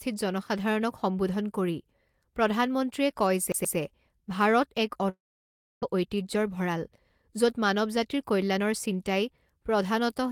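CD stuck on one turn, from 3.52 to 3.77 s: a scratch-style skip throws playback back at the same point, so a 126 ms slice of speech plays twice in a row, each jump marked by a brief mute, giving the quick, even stutter of a skipping disc.

Long network dropout, from 5.09 to 5.84 s: incoming audio stops, most likely because packets failed to arrive. The receiver stretches the last sound into a fading buzz, then leaves silence for roughly 640 ms. Speech resumes with about half a second missing.

Jitter buffer speed-up, from 5.93 to 8.96 s: after the gap, the receiver holds more audio than its target delay. It trims many tiny pitch-period pieces, about a fifth of a second in total, so speech runs roughly 7% faster at unchanged pitch and sounds hurried.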